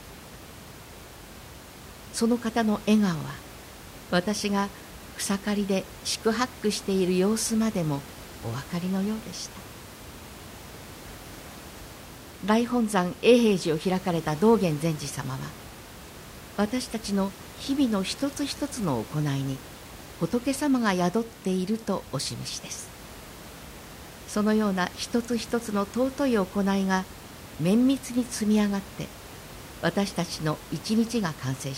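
No system faults are audible in the speech; the only background is the room's own noise, sitting about 18 dB below the talker.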